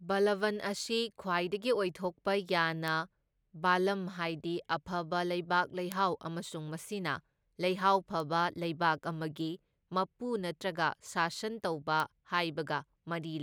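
Four sharp, isolated ticks cut through the speech at 2.88 s, 5.92 s, 8.2 s and 12.0 s. Each is a bit error spike: a single sample jumps by a power of two and snaps back, peaking at about -17, -11, -23 and -17 dBFS. The loudest is the one at 5.92 s.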